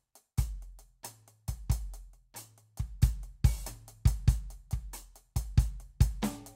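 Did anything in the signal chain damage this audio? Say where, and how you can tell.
No, nothing in the chain has left a mark on this music that I can hear.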